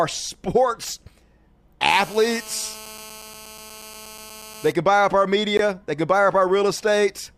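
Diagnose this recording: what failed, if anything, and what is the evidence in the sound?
A hard, raspy buzz at 217 Hz, rich in harmonics and about 20 dB below the speech, runs steadily from 1.90 to 4.72 s. This is GSM phone buzz at the analogue wiring stage. A nearby 2G handset on a call pulses its transmitter 217 times a second, and the audio circuitry rectifies those bursts.

At 5.57 s the speech drops out for about 19 ms in a clean, hard-edged hole. This is a gap between stream segments at the network and playback stage. Segment time stamps left a small gap, consistent with 6-second segments, and the player filled it with silence. No audio is lost.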